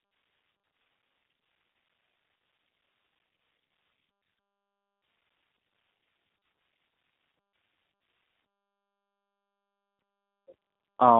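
Throughout, the speech has plain G.729 codec damage: a rough, synthetic, pulse-built texture, band squeezed to 150 Hz to 3.6 kHz, nothing past 3.8 kHz, consistent with 8 kbit/s.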